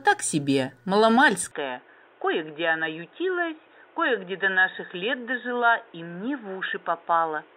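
At 1.51 s the sound abruptly turns dull and boxy through to the end, with nothing above 3.8 kHz. It becomes a few decibels quieter and gains a new background noise, with no gap. That fresh noise and level shift, unlike a plain filter, point to an input likely switched to a poorer device.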